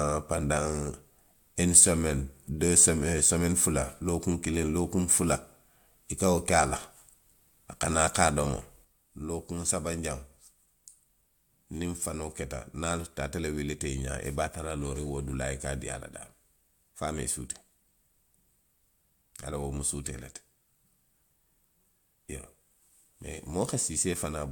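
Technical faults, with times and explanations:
8.85 s to the end, one channel drops out: from 8.85 s the speech falls abruptly by about 6 dB and stays at that lower level through to the end of the clip, with no recovery. This is the drop expected when one side of a stereo feed goes silent and the remaining channel is summed to mono, so the content shared by both channels loses half its contribution. The cause is likely a lost connection or failed channel upstream of the mono sum.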